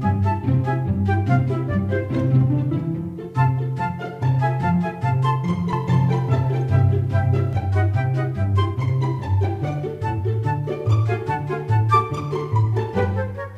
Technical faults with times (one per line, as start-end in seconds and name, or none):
5.73-7.53 doubled audio track